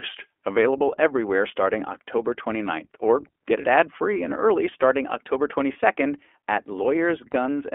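Throughout, the iLBC codec confines the speech to a narrow band of about 300 Hz to 3.4 kHz, with plainly audible rough, synthetic coding that fits its 15.2 kbps, 20 ms mode. At 3.62–3.66 s, 5.72–5.76 s and 7.32–7.34 s, a lost iLBC frame of 20 ms is bridged by a repeated, noise-mixed pitch cycle, heard as a brief buzzy held vowel before the speech recovers immediately.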